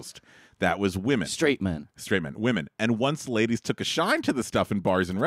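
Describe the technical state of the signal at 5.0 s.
At 5.0 s the speech carries GSM signalling bursts, running from 4.08 to 5.13 s. A nearby 2G phone sends short radio bursts while signalling. The audio circuit rectifies them. The result is galloping ticks and brief 217 Hz buzzes, roughly 25 dB below the speech.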